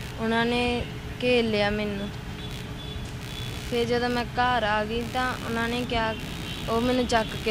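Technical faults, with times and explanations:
Throughout, computer activity noise: changing load from the processor, graphics card or mouse is disturbing the ground that the audio circuit shares with the computer, so that current leaks into the signal path. It comes through as a buzzy, chirping texture pulsing at around 70 times a second, sitting roughly 20 dB below the sound. It rises and falls with what the machine is doing rather than following the audio itself.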